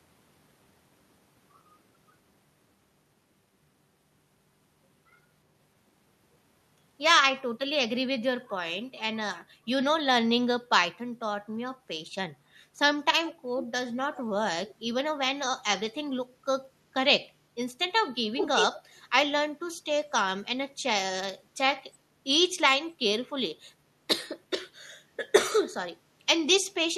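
An echo canceller clamped down on the microphone while its loudspeaker was active, and this is background gated by the echo canceller. The room sound behind the speech dips briefly at 9.49 to 9.65 s and 11.76 to 11.87 s, each by about 7 dB, and at 12.38 to 12.47 s by about 6 dB. Each dip lasts a tenth of a second or so before the ambience springs back.

From 13.25 s a delayed copy of the speech arrives 359 ms behind the original. This echo leak most likely comes from a loudspeaker-side canceller that failed to remove everything its microphone picked up, so the residue was sent back. It first appears as faint scraps at 13.25 to 13.32 s and 14.15 to 14.22 s, about 20 dB below the speech, and at 14.66 to 14.71 s, roughly 25 dB down. At 18.36 to 18.8 s it becomes a clear repeat about as loud as the speech itself.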